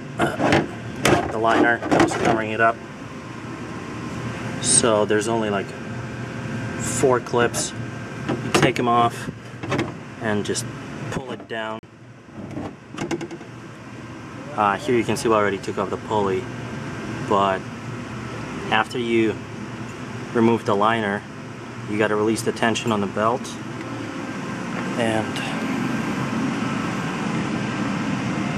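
A block of digital silence cuts the audio from 11.79 to 11.83 s: a 40 ms hole of silence with hard edges and no fade, which sets it apart from a faded dropout or concealed loss. It points to an output buffer not filled in time.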